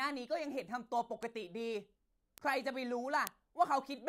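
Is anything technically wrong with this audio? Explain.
Yes. The speech carries three bit error spikes, at 1.23 s, 2.38 s and 3.27 s, peaking at about -28, -22 and -10 dBFS respectively. Each is a flipped bit in a stored or transmitted sample word, so the value leaps by a power of two and snaps straight back. The first spans three consecutive samples, the others a single sample. Each is heard as an isolated, broadband tick with no relation to the speech, the last being the loudest.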